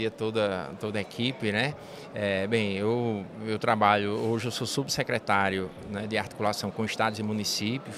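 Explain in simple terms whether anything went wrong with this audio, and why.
Nothing stood out on listening; there was no problem to point to anywhere in the recording.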